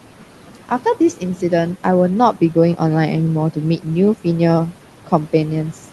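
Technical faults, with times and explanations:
Throughout, noise suppressor artifacts: a noise suppressor is cutting the room's background noise by about 12 dB, deciding band by band and frame by frame what counts as steady noise. That noise sits only about 17 dB below the speech. The noise drops away in the gaps between words and comes back up underneath them.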